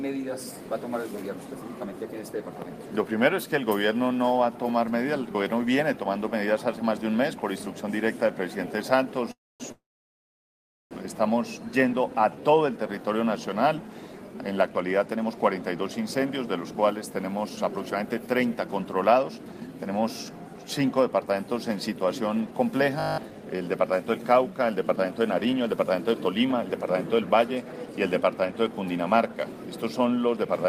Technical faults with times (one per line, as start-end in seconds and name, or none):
9.31-10.93 call audio freeze
11.95-12.55 jitter buffer slow-down
14.67-19.91 jitter buffer speed-up
22.51-30.65 jitter buffer speed-up
23.00-23.18 system hang loop